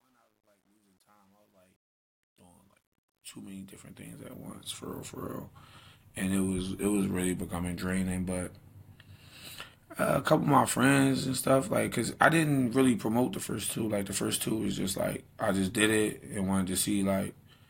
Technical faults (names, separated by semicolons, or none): truncation distortion on a fade